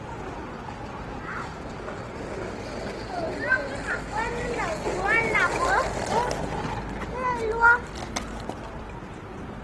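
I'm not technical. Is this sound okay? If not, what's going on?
No, it's not quite clean. All the way through, the sound has a grainy, rough, noisy texture, and nothing comes through above about 12.1 kHz, so the top end sounds cut off. That's likely Opus compression squeezed too hard.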